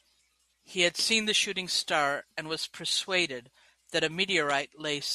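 From 0.30 s to 4.97 s, word clock ticks show that the receiving device is running on its own clock rather than locking to the incoming digital stream. The two clocks drift apart, which points to an error of roughly 50 ppm, so a single sample is dropped or repeated each time they slip. Through the speech this is heard as about fifteen sharp ticks, repeating roughly every 0.4 s.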